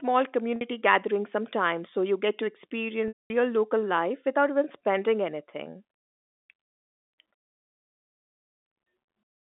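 Speech carried on a narrow telephone-band line, with two dropouts. At 0.56 s a brief buzzy hold lasts about 50 ms. At 3.08 s a 220 ms gap starts as the same held buzz, fades into silence, then cross-fades back into speech. Both are packet loss with pitch repetition: the receiver loops the last pitch period to bridge the missing audio.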